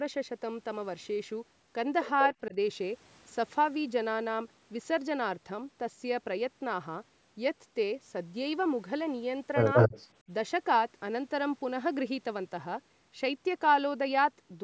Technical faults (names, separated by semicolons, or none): speech suppressed in double talk; echo leak